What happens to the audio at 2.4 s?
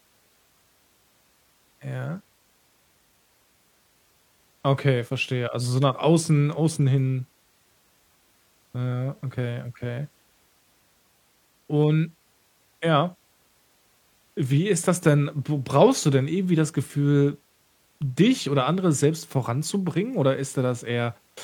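Nothing goes wrong at 2.4 s; the speech carries on intact through that moment with no audible fault.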